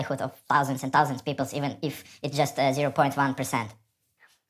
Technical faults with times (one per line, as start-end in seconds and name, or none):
0.00-4.50 wrong sample rate